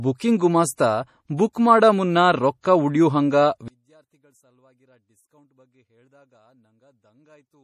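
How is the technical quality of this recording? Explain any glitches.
The recording has two clear problems: lossy compression damage throughout, and a collapse in level for the second half.

MP3 compression runs the whole clip. The encoder appears to have had too few bits, which fits a low bitrate around 40 kbps, so it likely dropped the weaker frequency components frame by frame and cut everything above 14.9 kHz. The damage is plainly audible: the speech takes on a watery, swirling texture, sibilants lose their top end, and consonant onsets blur.

One channel inverted takes over from 3.68 s, right after "ಉಳ್ಯೂ ಹಂಗ", and lasts to the end. The likely cause is reversed polarity on one side of a stereo source, so when the two sides were folded to mono the shared content cancelled. The speech and its background drop by about 38 dB at once. Only the small difference between the channels remains, a residue far below the level of the first half.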